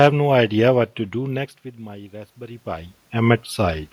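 From 1.13 s to 3.04 s there is an automatic gain rising fault. The speech level drops by about 18 dB around one second, as the talker moves away. The gain control hears the quieter input and raises its gain slowly, by about 6 dB over nearly two seconds. The speech and the room noise swell upward together. This slow climb is heard as a gradual lift in the whole sound, not as a step.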